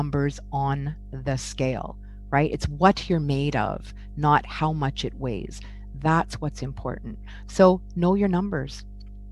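Power-line interference leaks into the signal path from start to finish, probably through a ground loop or a nearby transformer, producing mains hum: a steady low 50 Hz drone with some low harmonics above it, sitting only around 15 dB below the wanted sound.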